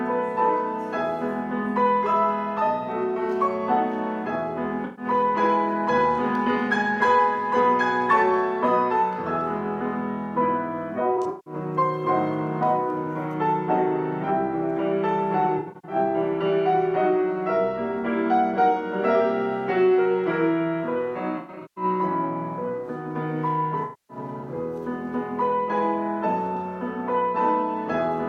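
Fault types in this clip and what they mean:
AAC frame loss with concealment: Runs of coded audio went missing, and the decoder filled each gap from the last good spectrum. Five smeared, noisy patches result, near 4.85, 11.16, 15.58, 21.38 and 23.83 s. Each covers about 0.13 to 0.3 s, some in scattered bursts.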